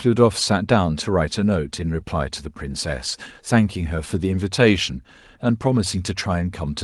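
Nothing here counts as a fault; the speech just sounds like an ordinary call, with the top end rolled off above about 12 kHz, which fits an Opus codec running at a modest bitrate.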